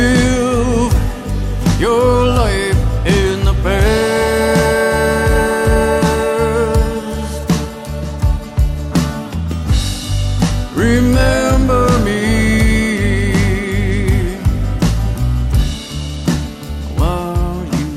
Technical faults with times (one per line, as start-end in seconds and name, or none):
none